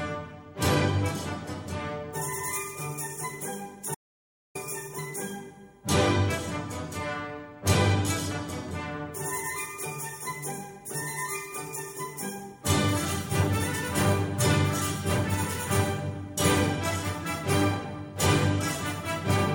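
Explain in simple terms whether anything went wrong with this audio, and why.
An audio dropout to silence happens at 3.95 s and lasts about 0.6 seconds, until 4.55 s. The sound cuts off mid-flow into total silence, with no background hiss, then returns. Most likely the input signal was briefly lost while recording continued, so whatever happened then is missing.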